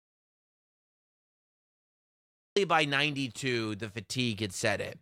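Until 2.56 s, an audio dropout to silence: silence without room tone, unlike a pause, then speech cuts in, likely after lost input.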